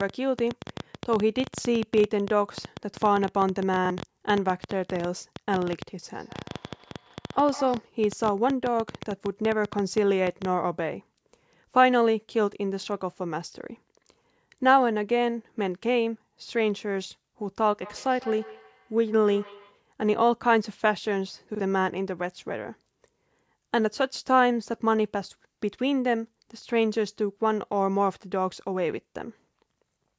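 From 0.01 to 10.46 s, a train of clicks runs under the speech, most likely interference from nearby equipment or a faulty connection injecting a pulse into the signal. About a hundred clicks of much the same shape arrive at roughly 9.5 per second but at an uneven pace, peaking around 10 dB above the speech. They are heard as irregular ticking and popping over the talking and through the pauses.

At 3.85 to 3.90 s comes a repeated buffer. Fresh audio failed to reach the playback device in time, so it replayed its last block, about 46 ms long, which fits a 2048-sample buffer. That block sounds twice with a hard join, and roughly 50 ms of real audio is lost. The result is a brief stutter.

Between 6.02 and 7.94 s, a feedback echo between two devices appears. One device's speaker plays what the other's microphone sent, and that microphone picks it up again. Neither echo canceller removes sound its own device didn't play, so the speech comes back at intervals of roughly 150 ms, thinner and more ringing each pass, peaking at about 18 dB below the speech. 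The same loop returns from 17.83 to 19.83 s, at about 19 dB below the speech.

A second repeated buffer hits at 21.55 to 21.60 s. It is again a 46 ms block played one extra time, heard as the same short stutter.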